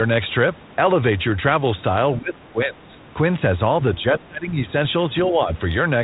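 Between 2.18 and 3.01 s, an echo canceller likely faced double talk, could not tell this talker from the far end's echo, and suppressed both. The speech dips by about 15 dB in patches, then dips again, by about 25 dB, from 3.98 to 4.59 s, and slightly, by about 5 dB, from 5.3 to 5.49 s.

From 4.70 to 4.85 s, bit errors on the ADPCM link knock the decoder's step size and prediction off track. Rough pops and short level jumps ring on, which points to a handful of damaged frames.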